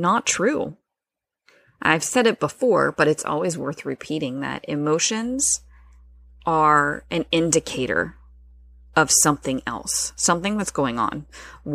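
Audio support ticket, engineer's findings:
Mains hum, 5.23 s to end of clip. Steady low tone at 60 Hz under the speech, with some low harmonics. Sits roughly 30 dB below program level. Absent before 5.23 s. Probable component: ground loop on interconnect or transformer near the chain. Power line coupling into signal path.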